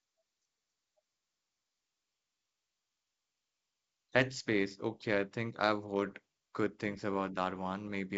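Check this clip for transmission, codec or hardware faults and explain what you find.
Nothing faulty turns up in this speech, which is carried by G.722 wideband telephone coding at 64 kbit/s, extending up to about 7 kHz with at most a faint trace of the coding in the band above 4 kHz.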